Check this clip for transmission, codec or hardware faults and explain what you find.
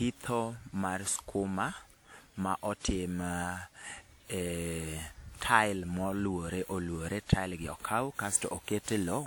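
One codec fault runs through the whole speech clip: generation loss.

The likely cause is repeated lossy re-encoding, around ten passes through a WMA-style codec at a rate that fits 96 kbit/s. Each decode and re-encode quantises again on a shifted frame grid, so noise stacks up. From start to finish the speech sounds swirly, smeared and hollow, worse than one pass at that rate would give, and consonant attacks blur. Content extends up to about 20.1 kHz.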